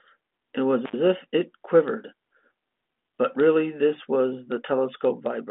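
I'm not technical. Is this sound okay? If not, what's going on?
No. Between 0.85 and 0.96 s the speech drops out for a split second, with a crackle on either side. That's an intermittent contact: a loose cable or plug briefly lost its connection, so the sound was cut for about 75 milliseconds.

At 3.35 s there's a tiny click, almost a buzz. That's a repeated buffer: the next bit of audio arrived late, so the device replayed its last very short chunk three extra times, which points to a very small buffer.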